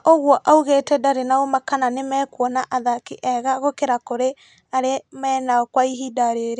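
No technical faults can be heard anywhere in the recording.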